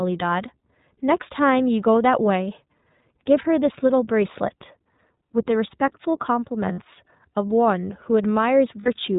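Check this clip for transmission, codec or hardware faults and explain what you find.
Two faults are present, both tied to the iLBC codec.

Throughout the speech, iLBC coding band-limits the sound to 4 kHz and leaves a rough, synthetic texture, consistent with its 15.2 kbps, 20 ms frame mode.

At 6.72 to 6.80 s and 8.80 to 8.88 s, lost iLBC frames are concealed by repeating the last pitch cycle with noise, heard as a buzzy held vowel of about 60 ms, which fits three lost frames.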